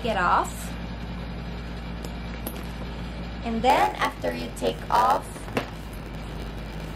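From 3.69 s to the end, a block size mismatch with padding sets in. One stage hands over blocks that are shorter than the next stage expects. The missing part of each block is filled with silence. These tiny gaps repeat at about 92 Hz, so a steady buzz sits on the sound. The audio also drags, running at 0.919 times normal speed. Its timbre stays much the same.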